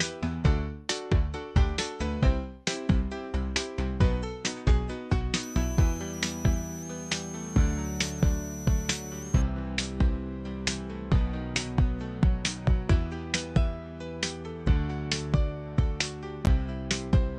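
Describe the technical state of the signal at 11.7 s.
At 11.7 s the signal is intact, with no audible fault at that moment.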